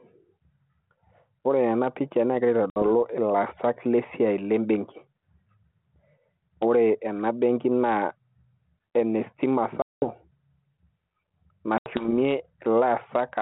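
It's a speech clip over a G.726 ADPCM line at 32 kbit/s, band-limited to roughly 150 Hz to 3.5 kHz. Gain pumping runs throughout: the gain ducks by something like 5 dB under each loud syllable, most likely from gain set too hot into a fast limiter. Packet loss on the ADPCM call shows up as hard silent holes at 2.70 to 2.83 s (60 ms, a few packets), 9.82 to 10.04 s (200 ms, around ten packets) and 11.78 to 12.12 s (80 ms). Each hole is followed by a stretch where the decoder's predictor and step size are out of step with the sender's, so the speech comes back slightly distorted.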